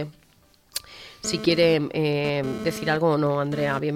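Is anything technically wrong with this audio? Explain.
Yes. GSM phone buzz runs from 1.25 s to 3.79 s. A nearby 2G phone is sending data in radio bursts about 217 times a second, and the audio circuitry rectifies those pulses into the signal path. The result is a hard, raspy buzz at 217 Hz, rich in harmonics and unrelated to the sound itself, sitting about 10 dB below the signal and coming and going as the data transfer proceeds.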